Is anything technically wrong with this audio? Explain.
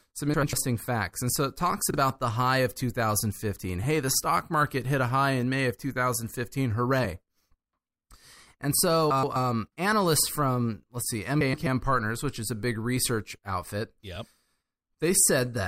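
Yes: the speech has frames out of order at 0.34–0.53 s, 1.90–1.97 s, 9.11–9.36 s and 11.41–11.67 s. In each, two adjacent runs of frames, about 96, 32, 128 and 128 ms long, play in swapped order, so the sound briefly flutters. Waveform and spectrogram show abrupt seams where energy and harmonics jump discontinuously, with no gap or lost time.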